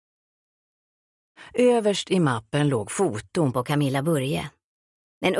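From 3.54 s to the end, a wrong sample rate plays the audio back unconverted, fitting 22 kHz material run at 24 kHz, so the sound runs 1.09 times fast and about 1.5 semitones sharp.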